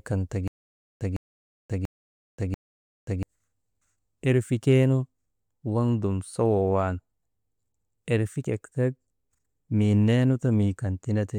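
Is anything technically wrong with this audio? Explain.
Yes, there is a stutter with silent gaps from 0.48 s to 3.23 s, right after "kan ta". A 156 ms fragment of speech repeats four times at an even 688 ms period, each repeat followed by about 532 ms of digital silence. The likely cause is a stalled player or stream that replayed its last buffered fragment on each retry and then ran dry. The speech that belonged in that span is missing.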